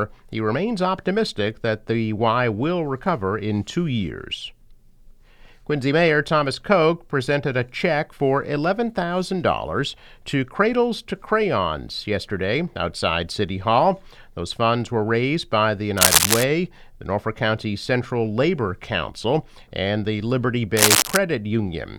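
Between 15.97 and 16.44 s, and again from 20.77 to 21.17 s, a burst of harsh, uneven scratching and rustling rides over the sound for just under half a second, somewhat louder than the audio beneath it. This is cable scratch noise, likely from a worn cable, connector or control being moved. The contact resistance jumps about erratically as it shifts, injecting dense, irregular noise into the signal until the contact settles.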